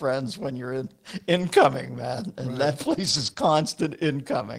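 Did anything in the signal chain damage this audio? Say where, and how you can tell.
Yes. The network path dropped packets, and the receiving codec rebuilt them from forward error correction carried in the packets that followed (lost packet rebuilt from error correction). At 1.37 to 1.43 s, 2.85 to 3.31 s and 3.37 to 3.55 s, the speech turns rougher and grainier without any gap. Those spans were decoded from a low-bitrate backup copy rather than the full-quality frames. The first span, about 40 ms, points to two lost 20 ms frames.

The network path also lost one stretch that had no backup copy, between 3.33 and 3.37 s (short concealed packet loss). About 20 ms of audio was missing, and the decoder filled roughly 14 ms of it by extending the preceding sound before blending back into real audio. This is heard as a brief smear or wobble squeezed between the two rebuilt passages. A short consonant there could have disappeared.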